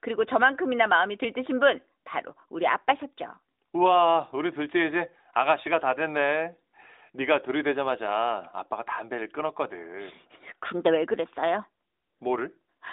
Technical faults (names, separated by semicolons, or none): none